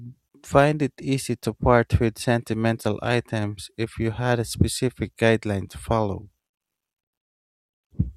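No dropouts, clicks, distortion or level jumps occur anywhere in the recording; nothing here calls for attention.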